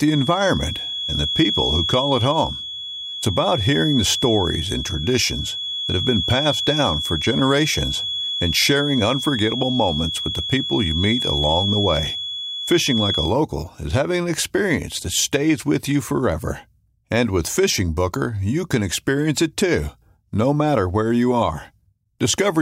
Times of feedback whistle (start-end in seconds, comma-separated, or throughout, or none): 0.00-13.36